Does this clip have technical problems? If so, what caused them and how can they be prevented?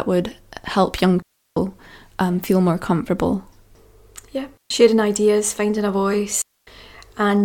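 Yes. The speech drops into clean near-silence three times, with no noise burst on either side: 1.22 to 1.56 s (about 0.34 s), 4.57 to 4.70 s (0.13 s), and 6.42 to 6.67 s (0.26 s). These are digital wireless dropouts, where the radio link lost too much data and the receiver muted with a very short fade. To prevent them, keep a clear line of sight between transmitter and receiver, shorten the distance, and move the link to a less congested channel.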